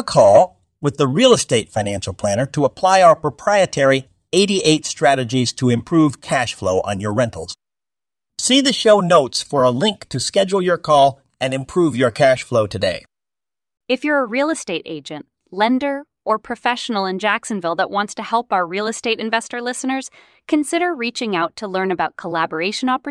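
No technical faults can be heard anywhere in the speech.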